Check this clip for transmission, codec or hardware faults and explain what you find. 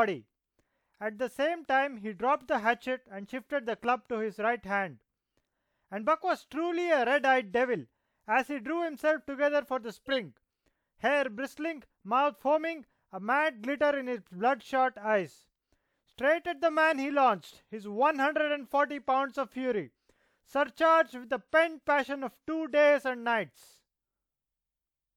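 One fault in this speech clip: a corrupt frame decoded at 10.06 to 10.16 s. Damaged bits in roughly a couple of compressed frames got played anyway, so misread gains put energy at wrong frequencies, giving a short burst peaking around -20 dBFS.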